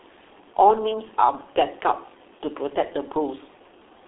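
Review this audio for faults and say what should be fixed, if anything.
G.723.1 codec damage runs throughout the speech. Nothing is heard above 3.8 kHz and the band sits at about 300 Hz to 3.7 kHz, so the voice is muffled. Coarse, slowly updated 30 ms frames, consistent with a roughly 6 kbit/s stream, make it hoarse and blur consonants.

To prevent this, carry the call over a wideband, higher-bitrate codec such as G.722 or Opus instead of G.723.1.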